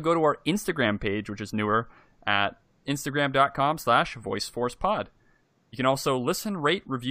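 No technical faults can be heard anywhere in the recording.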